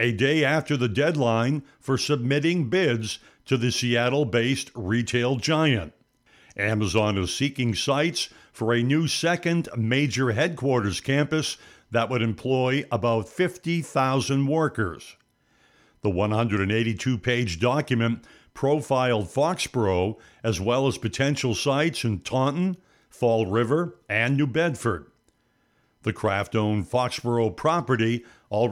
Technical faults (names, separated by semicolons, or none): none